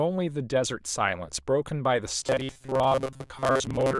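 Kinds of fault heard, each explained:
Robotic sound from repeated short buffers: from 2.2 s speech becomes a metallic 133 Hz buzz, likely a looped 7.5 ms chunk; spectrogram shows rigid harmonic stripes, waveform roughly repeating cycles.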